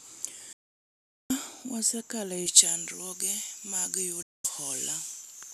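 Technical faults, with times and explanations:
0.53–1.30 s and 4.22–4.45 s, digital broadcast dropout: the audio fades out within about 3 ms and goes silent for 0.77 s, then 0.22 s. That fits a receiver muting on bad 24 ms frames, and what was sent during those gaps is gone.
2.46 s to the end, pre-emphasis left on: the treble sits about 11 dB hot at 10 kHz relative to 1 kHz, which fits a J.17 boost with no matching de-emphasis, so the speech turns thin, bright and hissy on sibilants.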